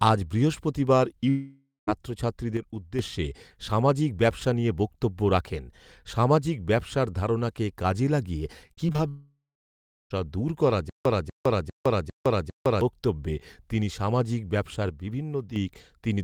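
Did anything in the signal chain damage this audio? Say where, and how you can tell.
Yes. The damage sits mostly at the network and playback stages, with a channel fault in the stereo path.

Long network dropout: at 1.29–1.89 s, right after "আজ বৃহস্পতিবার", the sound smears into a fading buzz and ends in about 0.17 s of near-silence. At 9.08–10.12 s, just before "দূর করা", about a second is lost, and the last 0.7 s is silent. The likely cause is a stalled stream with loss concealment running dry. It differs from packet loss because it is one long hole, not many short ones.

Repeated packet loss (robotic sound): from 8.67 to 9.00 s the audio turns choppy. Five short gaps, the longest 37 ms, are patched by extending the previous sound, so about a third of that span is concealment. This is network jitter or loss. The holes are brief, and the fill is never a clean repeat of one fragment, which separates it from a stutter.

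Stutter with silent gaps: after "দূর করা", from 10.90 to 12.81 s, a 242 ms burst replays five times, each followed by 159 ms of digital silence, for an even 401 ms cycle. "বক্তব্যে তিনি সামাজিক ব্যবসার" then resumes with the intervening audio gone. A playback buffer retrying after a stall is the likely cause. The exact repetition and true silence set it apart from concealment, which fades and varies.

One channel drops out: at 2.57–2.99 s and 14.89–15.56 s the level falls abruptly by about 6 dB and then recovers, with no smearing, buzz or gap. That is the signature of one stereo channel going dead before a mono fold-down, likely a connection or routing fault in the stereo path. A dropout would remove everything, whereas this leaves half the signal intact.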